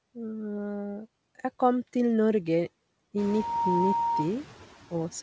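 A noise suppressor runs across the whole clip, pulling down the bands it judges to be steady noise by about 16 dB. Once the room noise rises around 3 s, the leftover noise dips between phrases and swells under the speech, over a call band topping out at 8 kHz.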